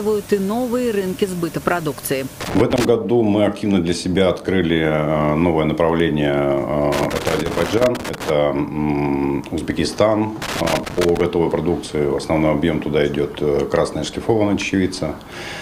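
At 2.41 to 2.89 s, 6.92 to 8.30 s and 10.42 to 11.21 s the sound breaks into loose connector crackle: irregular bursts of crackle and scratching. A worn or dirty contact in the signal path is intermittently losing connection, chopping the audio on and off many times in quick succession, while any DC present on the line adds clicks at each make and break. The middle burst is the longest, lasting about 1.4 s.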